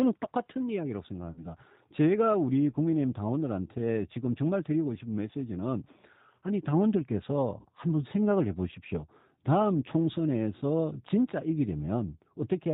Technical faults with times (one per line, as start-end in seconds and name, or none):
0.00-12.73 G.729 codec
1.32-1.42 VoIP packet loss concealed by the speech codec
7.61-7.66 VoIP packet loss concealed by the speech codec